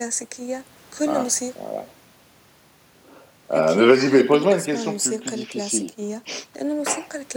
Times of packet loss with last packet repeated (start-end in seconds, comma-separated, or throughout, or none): none